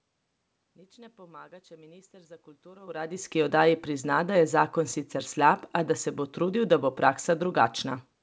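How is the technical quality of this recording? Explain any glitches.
There are no technical glitches to report in this recording. The speech comes through wideband telephone coding at 64 kbit/s with nothing above 8 kHz, some background noise from the room is audible, and around the 3-second mark the level shifts as the talker moves relative to the microphone.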